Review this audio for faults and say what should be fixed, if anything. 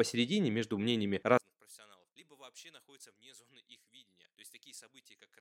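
From 1.38 s, right after "между мнениями", to the end, the speech drops by about 28 dB and what remains is a faint residue. This is one channel inverted, likely: with one side's polarity reversed, the centred speech common to both channels cancels on a mono sum, leaving only the small difference between left and right. Fix by restoring the inverted channel's polarity for that span. To prevent it, check channel polarity and mono compatibility on every stereo path before release.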